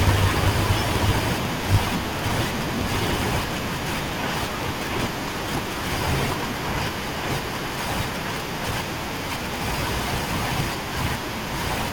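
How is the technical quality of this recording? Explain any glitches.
The recording has a fault that runs throughout the speech: a block size mismatch (truncated). One stage hands over longer blocks than the next reads, which fits 1024-sample blocks, so each block's tail is discarded. That produces a steady buzz near 54 Hz and speech running 1.16 times fast at roughly normal pitch, unlike a sample-rate error, where faster playback also raises pitch.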